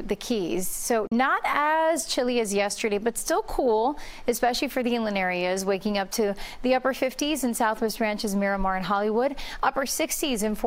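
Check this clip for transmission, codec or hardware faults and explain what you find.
One fault is present, a brief Bluetooth dropout near the start.

Bluetooth dropout, 1.07 to 1.12 s: the sound cuts to silence for about 41 ms. The likely cause is wireless packets arriving at the headphones too late and being discarded, which fits two lost packets. The sound then resumes further along, as though it had kept playing through the gap.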